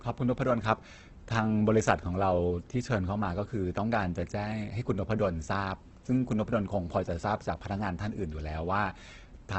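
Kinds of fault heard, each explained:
Opus compression: heavily grainy, rough, noisy speech with a dulled top, likely from a low-rate Opus encode near 12 kbps. Bands are filled, not hollowed into MP3-style swirls.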